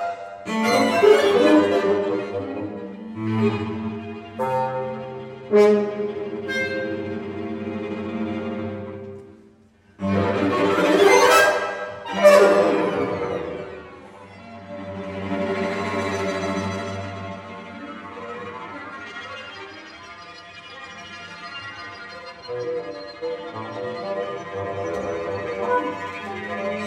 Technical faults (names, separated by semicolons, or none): channel delay (comb filtering)